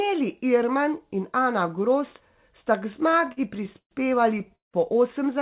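From 2.92 to 3.93 s, repeated stalls (stutter) break up the speech: the jitter buffer ran dry 14 times, and the receiver stretched the last sound for 289 ms in total, up to 126 ms at once. Between 4.39 and 4.76 s it stalls four more times, with one wait of 180 ms. Unlike packet-loss dropouts, nothing is actually missing. The speech drags and stammers rather than skipping, over narrowband audio with nothing above 4 kHz, which points to G.711.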